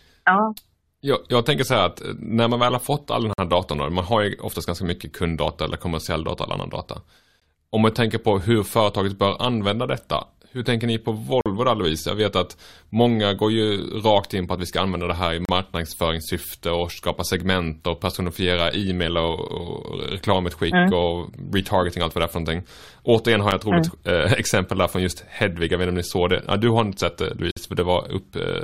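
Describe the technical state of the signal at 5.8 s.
At 5.8 s the speech signal is intact, with no technical fault present at that moment.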